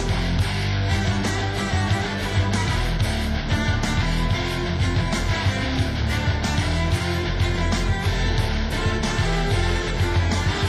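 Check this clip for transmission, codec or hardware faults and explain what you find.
Checking this clip turns up no faults to explain.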